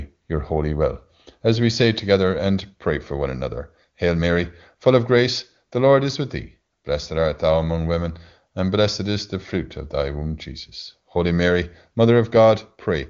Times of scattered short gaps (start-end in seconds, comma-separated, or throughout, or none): none